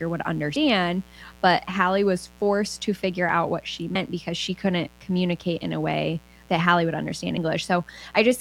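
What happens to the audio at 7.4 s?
At 7.38 s, compressed frames are skipped. About 150 ms of audio is never played, which fits roughly five 32 ms frames lost or rejected as damaged, so the sound jumps ahead.

Beneath this, as throughout, a 60 Hz mains buzz sits about 30 dB below the signal. Sharp switching spikes, twice per mains cycle, spread harmonics high up the spectrum, giving a raspy edge rather than the smooth tone of plain hum.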